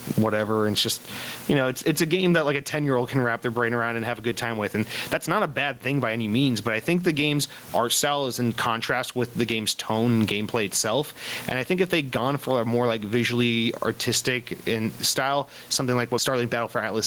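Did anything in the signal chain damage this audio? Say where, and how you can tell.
Yes. Gain pumping runs through the whole speech clip. The gain swings around 20 dB, and the dynamics sound squashed. Likely cause: input gain set far too high, with a fast capture-stage limiter pulling it down.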